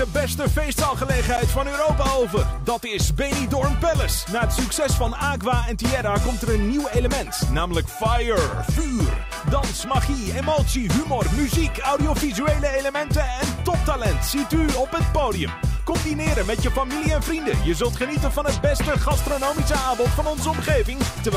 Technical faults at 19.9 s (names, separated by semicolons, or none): none